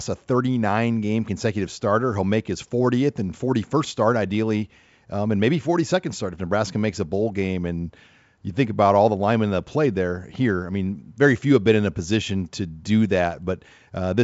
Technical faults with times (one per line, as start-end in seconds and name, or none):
none